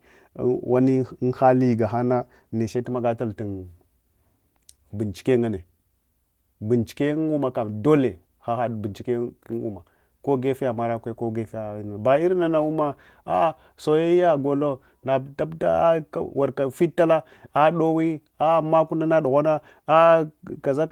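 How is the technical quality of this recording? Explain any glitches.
The recording has no technical glitches, and its Opus voice compression keeps the full band up to about 20 kHz with only a light trace of coding texture on the speech.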